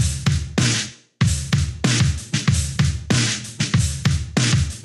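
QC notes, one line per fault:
No faults found in this clip. Nothing here needs flagging.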